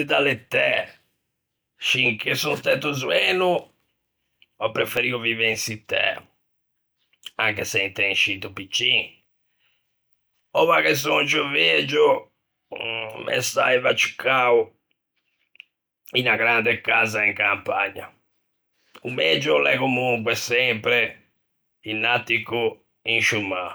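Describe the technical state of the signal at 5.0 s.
Just before 5.0 s, at 4.97 s, the speech has a block of digital silence about 2.4 ms long. A short run of samples drops straight to zero and the signal jumps back with no fade, so the two hard edges sit close enough to merge into a single tick. On a waveform it shows as a brief flat line at zero with vertical cliffs on both sides. A spectrogram shows a thin broadband vertical stripe through the speech.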